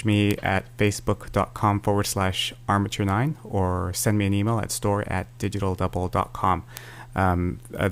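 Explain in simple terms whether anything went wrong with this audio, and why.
Bit error spikes at 0.31, 3.09 and 6.77 seconds: each time, one flipped digital bit throws a single sample far off, producing a brief sharp tick unrelated to the sound.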